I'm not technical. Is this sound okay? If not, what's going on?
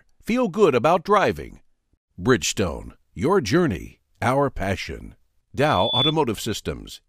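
No, there's a problem near the end. From about 5.59 to 6.14 seconds you get loudspeaker feedback squeal: a single high tone around 3.4 kHz that swells up over roughly 0.4 seconds until it's a bit louder than the speech itself. What's happening is that the microphone is picking up the loudspeaker it feeds, so that one pitch keeps going round the loop and growing on its own, until the loop is broken.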